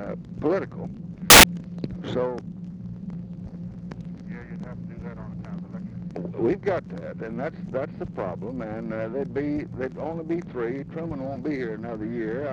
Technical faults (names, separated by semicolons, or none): samples built from the wrong bytes